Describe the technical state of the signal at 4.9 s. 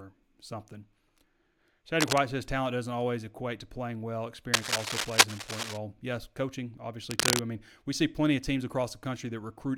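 At 4.9 s the speech is overlaid with cable scratch noise, running from 4.54 to 5.77 s and louder than the speech. The likely cause is a worn cable or connector being moved. Unlike steady hiss or evenly spaced clicks, it comes as dense, uneven bursts.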